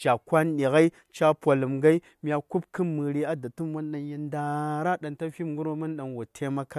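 Speech recording, no technical faults detected anywhere in the clip.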